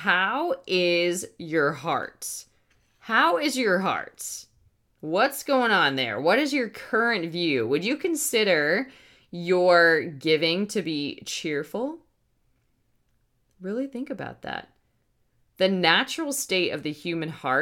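Speech recording, no technical faults detected.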